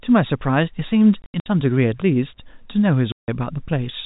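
From 1.22 to 1.46 s the speech gets chopped by hard-edged holes, about 160 ms missing in runs up to 80 ms. That's packet loss filled with silence, fitting 20 ms packets. At 3.12 to 3.28 s a clean 160 ms gap cuts in, all under the narrow telephone-band G.711 sound.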